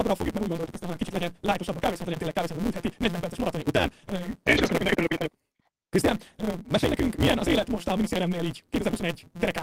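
A speech recording with a block size mismatch (truncated): one stage writes longer blocks than the next reads, so each block's tail is discarded, which fits a 256-sample read. This produces a steady 172 Hz buzz, and the speech runs 1.88 times too fast at near-normal pitch. Starting just after "fogjuk mert úgy", from 0.61 to 4.74 s, scattered short gaps appear where around seven small dropouts, the longest near 50 ms, were patched by extending the preceding sound, leaving brief ticks and hiccups.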